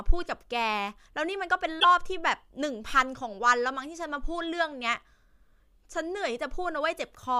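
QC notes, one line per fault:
1.77–1.85 s, damaged data in a compressed stream: for roughly 80 ms part of the coded speech stream arrived corrupted, so the decoder could not parse the affected frames, lost its place in the bitstream and had to hunt forward for the next valid frame header before decoding could resume. What comes out of that stretch is a brief chirp, squawk, click or short hole rather than speech, and the audio picks up again after it.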